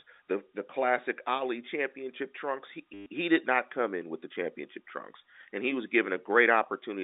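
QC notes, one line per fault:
2.94–3.06 s, packet loss with last packet repeated: a 120 ms gap filled by one short packet looped, buzzing near 100 Hz, consistent with 10 ms packets.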